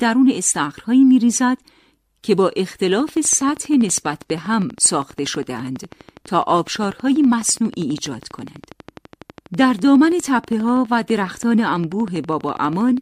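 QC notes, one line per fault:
2.84–12.98 s: train of clicks, about 150 evenly spaced ticks at 12.2 per second, roughly as loud as the speech, likely from electrical interference or a faulty connection or power supply.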